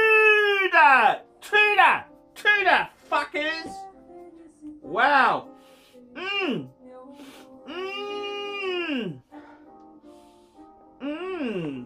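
Dropped samples at 5.27 s and 8.49 s: each sharp click is likely caused by a single lost sample, making the waveform jump abruptly to a later value.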